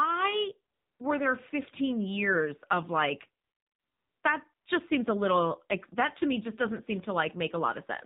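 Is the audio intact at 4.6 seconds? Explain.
No. Between 4.53 and 4.66 s the real background drops out and is replaced by a smooth, steady hiss that switches in and out again, a gap of about 120 ms. This is AMR comfort noise. The sending phone judged the talker silent and stopped transmitting speech frames, so the receiver filled the pause with synthetic noise built from a rough description of the background's level and spectrum.

Throughout, including this moment, the sound is muffled, buzzy and synthetic, with nothing above 4 kHz. This comes from the AMR narrowband mobile codec. It samples at 8 kHz and rebuilds the voice from a vocal-tract model driven by a few pulses per 5 ms subframe. The damage is plainly audible, which fits a low mode of about 7.4 kbps.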